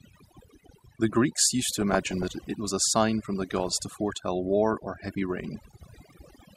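A speech recording carries overdone noise removal from start to finish: the noise reducer has been pushed so hard that any frequency band sitting near its noise estimate gets pulled right down, taking the softer parts of the voice with it. The result is a near-silent background sprinkled with twinkling specks. On a spectrogram the gaps between words look unnaturally black, dotted with isolated bright pixels, and the harmonics show ragged holes where weaker detail was carved away. On top of this, DAB burbling breaks in three times, from 1.62 to 2.47 s, 3.42 to 3.82 s and 5.54 to 6.05 s. This is the signature of weak reception, where bit errors slip past error correction into the MP2 stream and corrupt samples and scale factors, so individual sub-bands leap in level for up to a frame. The middle burst has the highest error rate, about 0.4%, and the last the lowest, about 0.15%, a few tenths of a percent at most. 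A spectrogram would show blocky horizontal patches flickering frame by frame within those spans, and the waveform would carry small irregular spikes and level jumps.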